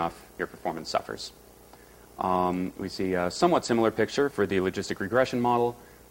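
Nothing technically wrong turns up here: no glitches, dropouts or distortion anywhere in this bit of audio.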